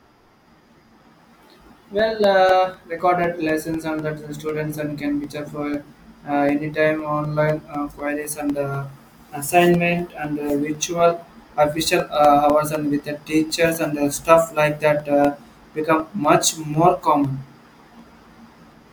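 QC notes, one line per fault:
0.25 to 18.74 s, periodic USB or driver dropouts: a steady tick every 0.25 s, heard only while speech is present. Each time roughly a millisecond of audio drops to silence as a background task stalls the USB bus or audio driver on a fixed schedule.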